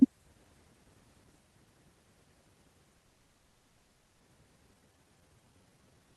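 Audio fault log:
2.97–4.22 s, call audio freeze: The speech stops moving forward for about 1.23 s. The last sound is carried on as a buzzy, hissy tail that fades, but it never drops to full silence. This is likely packets held up in transit, so the jitter buffer ran dry and the receiver stretched what it had. When the audio resumes, it picks up exactly where it left off. A gap has been inserted, and nothing is lost.
4.70–4.73 s, skip ahead: Playback jumps forward abruptly, with only a tiny filled seam of about 10 ms. Roughly 0.7 s of speech is missing, and the two sides are butted almost directly together. This comes after the freeze. A stretch of audio was dropped, either in transit or by the jitter buffer when it overflowed, while later audio was already waiting. The lost delay, about 0.7 s, is smaller than the earlier stall.
4.74–6.17 s, jitter buffer slow-down: From just after the jump to the end, speech runs at about 81% of normal speed. 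The pitch stays the same. About 275 ms of extra material is added over this stretch. The receiver is repeating single pitch periods and bits of pauses back to back to rebuild its reserve after the skip. Sounds come out drawn-out.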